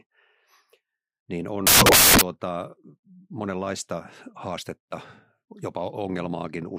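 From 1.67 to 2.21 s the speech drops into loud, harsh broadband noise, samples built from the wrong bytes, the misassembled low bits swamping each value.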